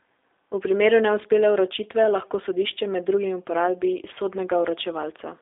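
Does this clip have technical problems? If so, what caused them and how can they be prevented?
Yes. For its whole length the speech went through a G.729 codec, which fits an 8 kbit/s G.729A telephone link. The audio is confined to about 300 Hz to 3.6 kHz, with nothing above 3.7 kHz. Because each 10 ms frame is rebuilt from a vocal-tract filter, a pitch predictor and a few pulses, the speech sounds plainly rough and synthetic. Using a wideband codec such as G.722 or Opus at a higher bitrate would prevent this.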